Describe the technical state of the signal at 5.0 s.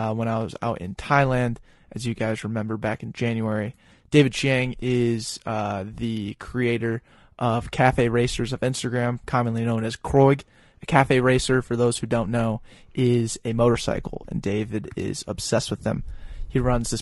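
At 5.0 s, as throughout the speech, low-delay AAC compression is plainly audible, likely AAC-ELD at a low bitrate around 32 kbps. Its short frames resolve pitch harmonics poorly, so the voice sounds rough and grainy, with noise filling between harmonics.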